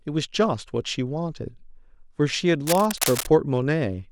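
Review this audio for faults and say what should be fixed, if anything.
From 2.67 to 3.31 s there's a patch of cable scratch noise sitting over the speech: dense, uneven bursts of scratchy rustle, only a little quieter than the voice itself. It sounds like a worn cable or connector being nudged, which is the likely cause, so the contact resistance jumps around erratically and drops ragged noise straight into the signal. I'd retake or repair that stretch. Next time, swap out the tired cable and tape it down so nothing shifts mid-take.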